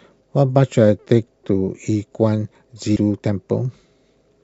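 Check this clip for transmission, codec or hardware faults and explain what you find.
One codec fault turns up in the speech. At 2.95 s, damaged data in a compressed stream leaves the decoder misreading corrupted frames and losing sync, producing a brief glitch.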